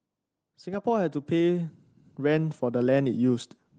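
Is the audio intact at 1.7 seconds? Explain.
No. At 1.7 seconds the clip is partway through an automatic gain rising that runs from 0.63 to 3.46 s. The gain control judged the input too quiet and kept turning it up, by about 11 dB over the whole span, so the speech and the background noise floor swell together. That shared, slow climb over nearly three seconds sets it apart from a speaker simply talking louder, where the background would stay level, or from an abrupt gain jump.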